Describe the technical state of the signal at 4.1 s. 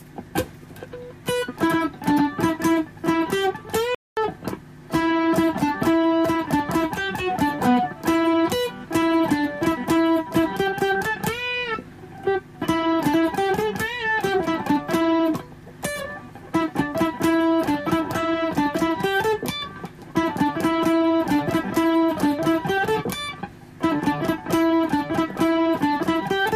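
A playback stall runs from 3.95 to 4.17 s: sound halts for about 223 ms, likely from a starved or blocked player, then resumes.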